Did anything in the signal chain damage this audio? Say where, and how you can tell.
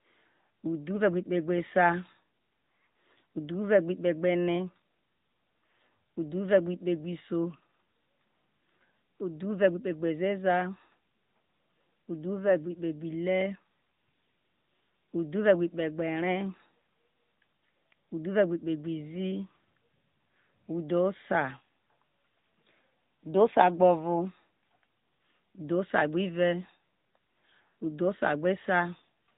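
Yes, at the codec stage: the AMR narrowband mobile codec at 10.2 kbps runs throughout, cutting everything above 4 kHz and leaving the speech buzzy and synthetic.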